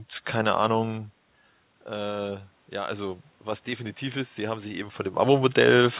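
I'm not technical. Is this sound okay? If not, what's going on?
No. From 1.86 s to 5.0 s there is automatic gain rising. After the talker moves back from the microphone around the one-second mark, the call's automatic volume control slowly turns itself up to compensate, so the voice and the room noise behind it swell together over those three seconds.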